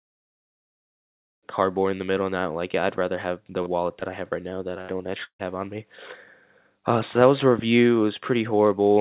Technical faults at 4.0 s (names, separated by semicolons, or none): short concealed packet loss